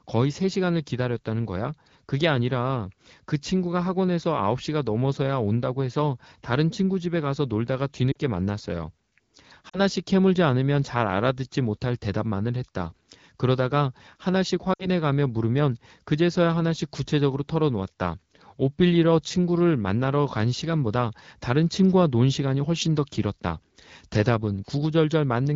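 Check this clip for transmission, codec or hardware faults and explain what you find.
Three short dropouts come from lost AMR speech frames. The speech is carried by the AMR wideband (HD Voice) codec, and its light coding texture fits a rate around 15.85 kbit/s.

The dropouts fall at 8.12 to 8.17 s, 9.69 to 9.80 s, and 14.73 to 14.88 s. Radio errors corrupted frames. The decoder then stretched the last good pitch and vocal tract settings while lowering the gain. Each gap drops to near silence within two frames. The first two fit about two lost 20 ms frames, and the third about three. The speech returns weak or rough for a moment.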